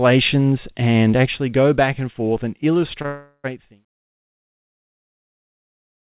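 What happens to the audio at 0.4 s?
Nothing goes wrong at 0.4 s; the speech there is intact, with no dropout, click or level change.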